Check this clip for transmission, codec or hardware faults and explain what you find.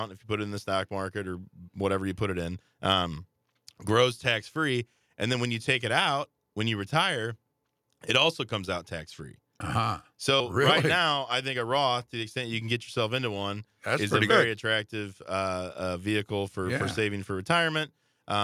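Two skips where audio is missing between chunks: at 10.4 s just before "really right now I", and at 14.3 s between "is a very" and "attractive uh uh vehicle". Each jumps over about a tenth of a second, likely lost during a 4-second chunk handover.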